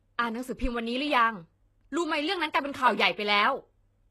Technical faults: HE-AAC compression

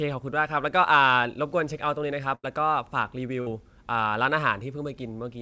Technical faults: burst of packet loss

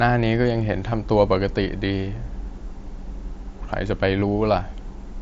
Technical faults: concealed Bluetooth headset packet loss

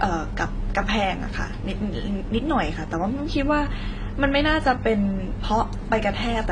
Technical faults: transcoding between lossy codecs

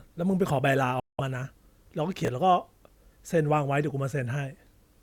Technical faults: Bluetooth dropout; chunks out of order

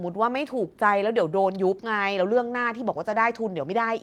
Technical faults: lost packet rebuilt from error correction

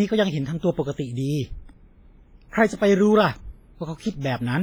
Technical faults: WMA compression

